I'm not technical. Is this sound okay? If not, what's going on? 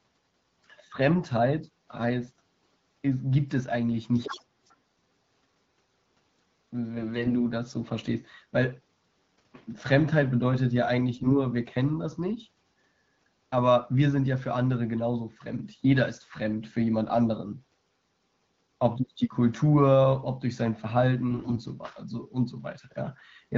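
No, there are two problems. From 4.14 to 4.44 s and again from 4.66 to 4.75 s, the other side's voice is leaking through. Their sound likely escaped the phone's echo removal.

There are AMR bit errors at 6.98 to 7.32 s, 11.13 to 11.37 s and 21.30 to 21.59 s. A weak signal scrambled some data, so the speech turns hoarse and gargly.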